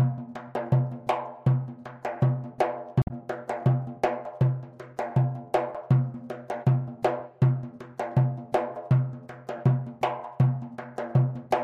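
A short burst of damaged data in the compressed stream corrupts the audio from 2.99 to 3.11 s, heard as a brief glitch lasting about 0.11 s. The decoder misreads the bad frames and loses sync until it finds a valid header. On a spectrogram this shows as a brief, smeared vertical block; the waveform shows an abrupt discontinuity.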